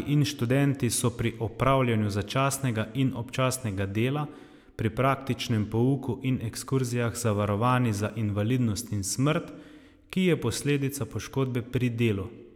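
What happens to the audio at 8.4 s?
Nothing goes wrong at 8.4 s; the speech runs on intact through that moment with no dropout, click, distortion or other fault.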